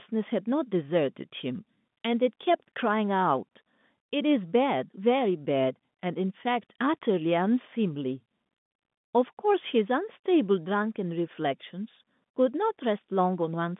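Speech with no technical faults.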